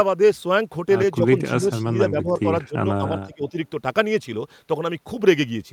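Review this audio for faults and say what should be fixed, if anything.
Speech suppressed in double talk: the echo canceller likely mistook overlapping talk for echo and ducked it, so speech dips roughly 10 to 20 dB at 1.41–1.87, 2.10–2.39, 2.65–2.76 and 3.25–3.54 s.

Echo leak: the far end's canceller likely passed some loudspeaker pickup back, so a faint copy, about 35 dB down and 238 ms late, surfaces at 1.89–1.93 s.

Better double-talk detection, with a softer suppressor and stronger, well-converged echo cancellation (or a headset at the loudspeaker end), would prevent both.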